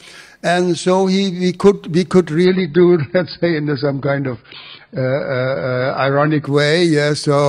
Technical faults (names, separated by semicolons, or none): adaptive stream at a lower bitrate